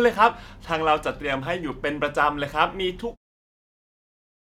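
No faults found in this speech recording; the level eases down from around 3 s to 3.17 s in an ordinary editor's fade-out.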